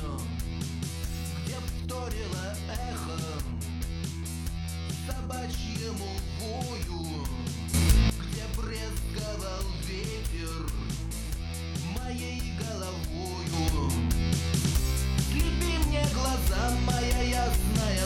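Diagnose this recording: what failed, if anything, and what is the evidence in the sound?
Sudden gain jump at 7.74–8.10 s (about 12 dB) and from 13.53 s to the end (about 6 dB): sound and noise floor step together, likely from unramped digital gain changes.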